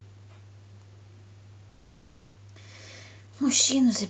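From 1.69 to 2.40 s, a long network dropout likely stopped audio arriving; the receiver stretched the last sound as a fading buzz, and about 400 ms never plays. From 3.00 to 4.04 s, a jitter buffer speed-up trims around 40 ms of pitch periods, so the speech runs 3% faster, at unchanged pitch.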